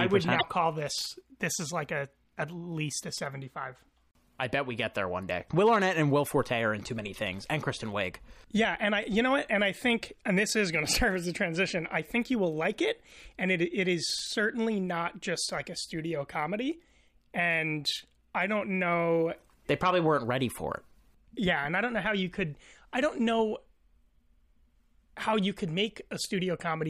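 Speech clip with one glitch from 0.38 to 0.44 s, between "I would" and "call this": the audio skips forward and about 60 ms, roughly two 26.1 ms frames, comes out garbled. This is likely a broken MP3 bit reservoir, where frames decode against borrowed data that is no longer there.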